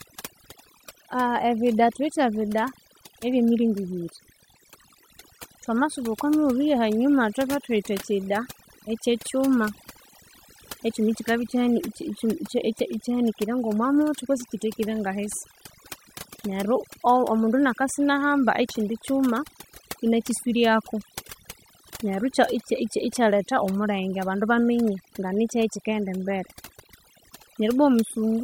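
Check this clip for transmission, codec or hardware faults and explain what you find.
One processing fault runs through the whole speech clip. Overdone noise removal is present throughout: an over-aggressive suppressor zeroes bands near its noise estimate, leaving near-silent gaps with twinkling specks. Unlike codec artefacts, the swirl tracks the background's level rather than the bitrate.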